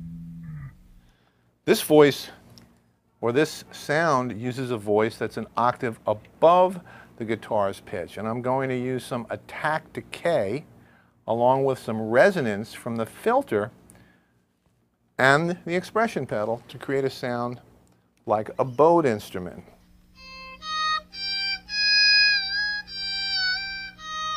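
Nothing stood out on listening to this recording.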